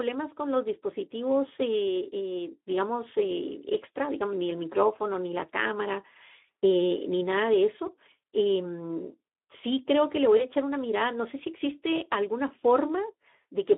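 Throughout the recording the Speex codec leaves speech hoarse and grainy, confined to a narrow line band of about 250 Hz to 3.6 kHz. The harshness points to a Speex mode near 11 kbps, where the excitation is starved of bits. Unlike MP3-style artefacts, there is no warbling or swirling in the highs, only a rough, hoarse texture.

At 8.21 to 8.23 s, and again at 10.37 to 10.46 s, a single 20 ms packet is lost and covered by packet loss concealment in the speech codec. The decoder extrapolates from its last pitch and filter, so the sound is stretched into a brief tone or coloured noise that fades, and the signal stays weak or distorted as it recovers rather than cutting to silence or clicking like a plain dropout.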